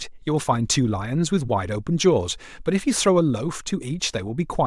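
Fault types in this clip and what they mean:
Nothing to flag here: no dropouts, glitches or other faults turn up anywhere in the speech.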